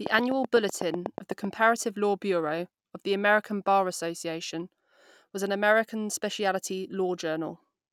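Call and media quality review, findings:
Train of clicks, 0.06–1.45 s: regular ticking at about 8 per second, roughly ten pulses, peaking about 15 dB above the speech. Likely external interference or a faulty connection or power supply injecting near-identical pulses. Unlike random crackle or clipping, the clicks keep the same shape and the same spacing, continue through pauses, and don't follow the speech level.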